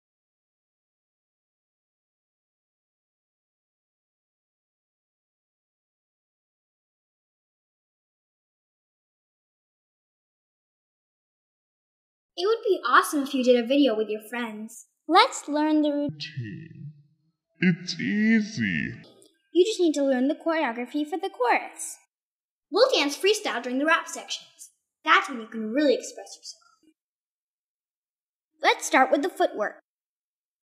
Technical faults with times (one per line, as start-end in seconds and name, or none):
16.09-19.04 section at the wrong speed